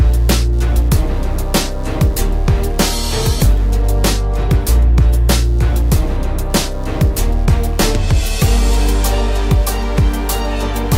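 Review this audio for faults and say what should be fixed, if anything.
Computer activity noise runs through the whole clip. A buzzing pulse at roughly 100 Hz sits about 35 dB below the sound. It follows the computer's load, not the audio, because processor and graphics activity disturb the shared ground. Fix it with isolated USB or balanced connections and a ground loop isolator.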